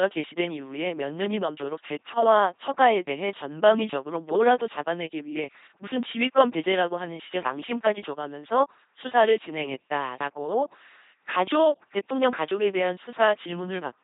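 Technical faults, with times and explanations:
Throughout, LPC-10 vocoder: speech was resynthesised from a ten-pole filter driven by pulses or noise at about 2.4 kbit/s, giving a buzzing robotic voice with nothing above 3.8 kHz.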